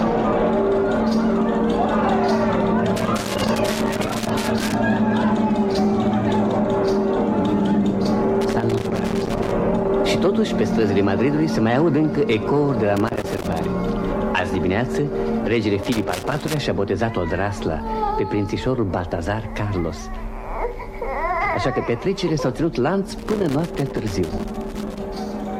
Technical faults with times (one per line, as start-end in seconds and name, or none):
2.96-4.74 loose connector crackle
8.41-9.52 loose connector crackle
12.97-13.65 loose connector crackle
15.83-16.58 loose connector crackle
23.18-24.98 loose connector crackle